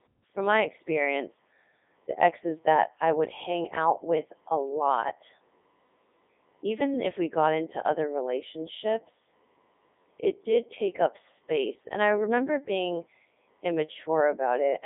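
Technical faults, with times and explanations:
Throughout, Codec 2 vocoder: the speech is resynthesised from sine waves, giving a robotic, buzzy tone consistent with its 3.2 kbit/s mode. This differs from ordinary narrowband telephone filtering, which keeps the waveform. Here the band runs 300 Hz to 3.6 kHz, with nothing above 3.8 kHz.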